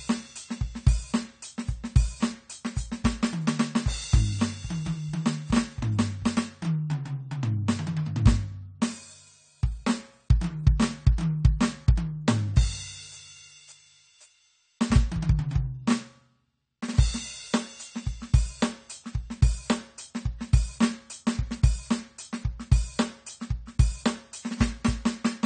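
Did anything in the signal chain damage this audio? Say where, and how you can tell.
Yes. For the full length of this music the top end is missing, with nothing above 9 kHz, and sustained tones and sibilants carry a warbling, fizzy smear that makes the mix sound dull and watery. The damage likely happened at the codec stage as AAC compression (AAC-LC) at a low rate, which fits roughly 32 kbps. Short of bits, the encoder drops the high band, then coarsely quantises what remains, leaving spectral holes that flicker between frames.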